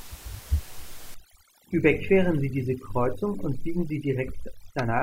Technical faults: overdone noise removal

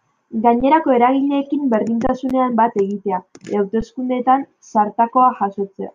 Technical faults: underrun with held sample

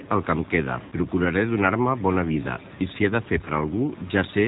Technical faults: G.729 codec; VoIP packet loss concealed by the speech codec

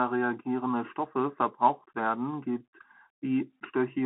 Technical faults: Bluetooth CVSD headset codec

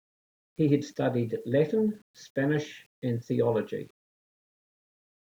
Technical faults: low bit depth without dither

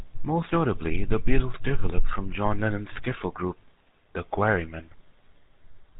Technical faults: GSM full-rate codec

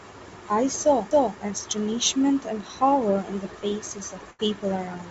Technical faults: CD skip; burst of packet loss

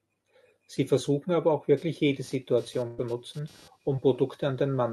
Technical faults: computer activity noise; burst of packet loss; short concealed packet loss

